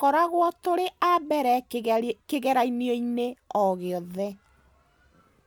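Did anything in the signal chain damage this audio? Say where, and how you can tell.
No, no stage of the chain damaged this speech.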